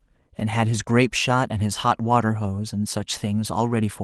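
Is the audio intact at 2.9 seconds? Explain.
Yes, the speech at 2.9 seconds is intact, with no dropout, click or other fault there, only the light, steady character of the Opus voice compression that runs through the clip.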